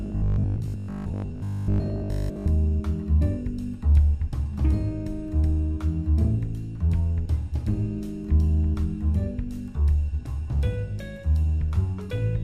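Robotic sound from repeated short buffers, 0.02 to 2.48 s: a rigid 50 Hz buzz, likely one 20 ms chunk replayed over most of it.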